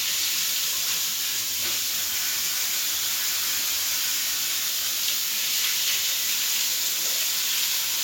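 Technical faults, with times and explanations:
Nothing stood out on listening to this recording of sounds.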